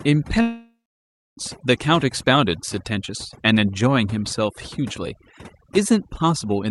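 A speech clip with overdone noise removal the whole way through: the suppressor cuts bands near its noise estimate so hard that the background drops to speckled near-silence. From 0.41 to 1.39 s there's a gap that sounds like a long network dropout, most likely. The receiver stretches the last sound into a fading buzz or hiss, leaving about 0.64 s of silence before the audio picks up later with that section gone. The top end stops around 12 kHz, which fits an Opus call path at something like 48 kbps.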